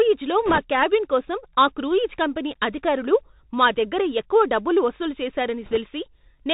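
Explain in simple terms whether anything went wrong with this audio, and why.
Throughout, the speech sounds muffled, thin and hissy, with scratchy s sounds. That's the Bluetooth CVSD headset codec, which discards everything above 4 kHz.

From 0.46 to 0.59 s, just before "క్యాబిన్ కోసం ఆ క్రూయిజ్", and from 5.63 to 5.77 s, right after "దగ్గర ఎక్కువ డబ్బులు వసూలు", a brief rushing crackle appears. These are bit errors on a Bluetooth voice link, where flipped bits add noise without loud clicks.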